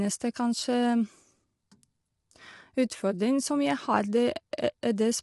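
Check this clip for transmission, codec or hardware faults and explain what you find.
One codec fault runs throughout. Low-delay AAC compression is the likely cause: short frames blur pitch harmonics, leaving rough, grainy speech, which fits about 32 kbps, with nothing above 11.7 kHz.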